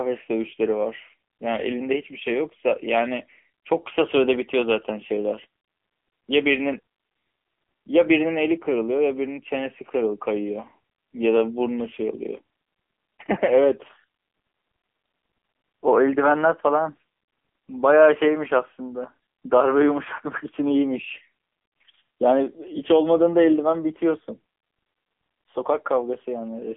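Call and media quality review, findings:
AMR narrowband mobile codec, whole clip. Speech band-limited to roughly 250 Hz–3.4 kHz, nothing above 3.5 kHz; dull, telephone-like. Plainly audible buzzy, synthetic texture from pulse-excited vocal-tract model over 20 ms frames. Coarse rendering consistent with low AMR-NB mode, around 8 kbps. Probable component: mobile/2G-3G call leg transcoding to AMR-NB.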